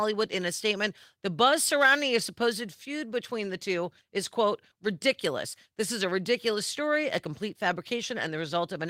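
At 0.59 to 0.61 s the speech has a lost packet rebuilt from error correction: a single 20 ms frame went missing, and the decoder played the low-bitrate copy carried in the next packet. It sounds briefly rougher and noisier, yet with no gap or smeared repetition, unlike packet-loss concealment.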